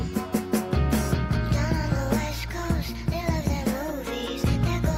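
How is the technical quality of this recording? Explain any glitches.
No glitches or technical faults can be heard anywhere here.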